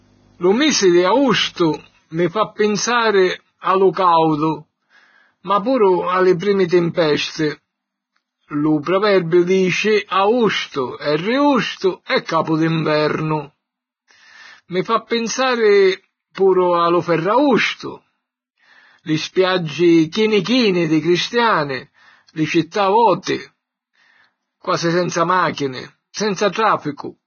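Throughout the speech there's heavy codec damage, likely Vorbis compression. Nothing survives above 6.6 kHz, and the coarsely quantised treble turns hissy and grainy, which fits a stream around 17 kbps.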